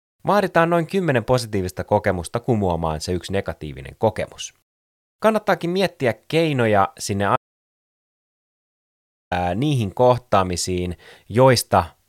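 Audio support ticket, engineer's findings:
Audio dropout to silence, 7.36 to 9.31 s: speech cuts out mid-flow, about 1.95 s of dead silence, no room tone, then speech resumes abruptly. Likely input lost upstream (device disconnect, failed link or stray mute) while the recorder kept writing silence. Missing content unrecoverable.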